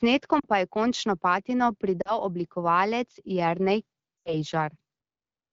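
You get three spots of lost AMR speech frames here, at 0.39 to 0.47 s, 2.02 to 2.18 s and 4.18 to 4.36 s. Radio errors wiped out frames, so the decoder kept replaying the last good pitch and vocal-tract settings at falling gain. The first two are short warbly dips, each fitting two 20 ms frames. The last one runs longer, closer to four frames, dropping to near silence before the speech comes back a bit rough, over otherwise clean HD Voice coding.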